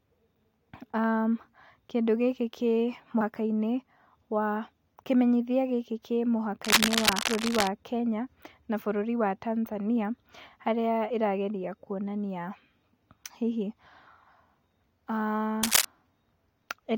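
At 3.20 s, just after "kĩndũ gĩkĩ kĩ", a brief blip marks damaged data in the compressed stream. The decoder lost sync. The same happens at 7.27 s and 11.1 s. From 6.63 to 7.68 s, scratching about as loud as the speech runs over it. From 15.63 to 15.85 s it returns, somewhat louder than the speech. This is likely cable scratch noise, from a worn contact being moved.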